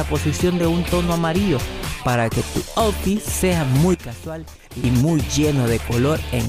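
A gain setting likely applied without a ramp causes a sudden gain jump from 3.94 to 4.84 s, dropping the sound and background together by about 11 dB.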